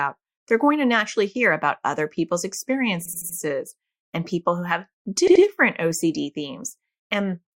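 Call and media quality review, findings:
Repeated frames, speech stutter at 3.05 to 3.38 s. One 80 ms block replays four extra times, adding 320 ms. Likely jitter buffer or encoder resend. Repeated frames again at 5.27 to 5.44 s, after "and people who have". An 80 ms block plays twice more, adding 160 ms.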